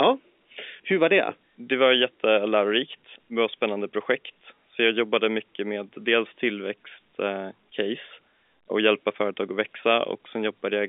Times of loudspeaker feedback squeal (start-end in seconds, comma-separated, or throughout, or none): none